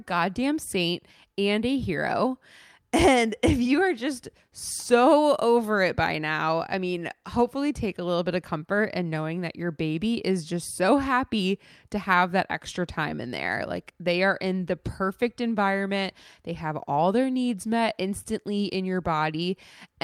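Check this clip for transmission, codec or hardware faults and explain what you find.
No transmission, codec or hardware faults can be heard anywhere in the recording; the speech signal stays continuous and intact throughout.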